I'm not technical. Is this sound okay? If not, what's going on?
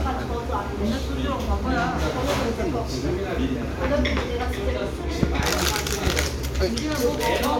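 No. There are loud pops at 5.23 to 5.42 seconds, heard as two sharp pops close together, and again at about 6.07 to 6.09 seconds as a single pop. Each is a sudden jolt of electrical voltage added to the signal, likely from a cable being plugged in, a switch, static or a glitch in the audio hardware. The equipment passes that jolt along as a quick thump sitting on top of the sound, which keeps going underneath.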